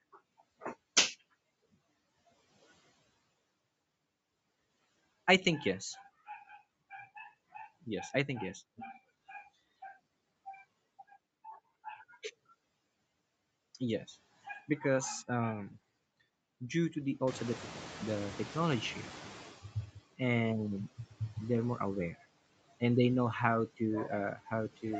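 Noise suppressor artifacts run through the whole clip. The suppressor cuts bands it judges to be steady noise by about 16 dB, frame by frame. The background sinks between the phrases and rises beneath the speech.

From 17.27 to 19.67 s the noise suppressor is catching up. The room noise jumps by about 15 dB near 17.5 s. The suppressor's noise estimate lags behind, so the louder noise comes through with less reduction at first. It then sinks over about 2.4 s, with about 12 dB of cut at that point. Nothing is heard above 8 kHz, which fits an Opus call path.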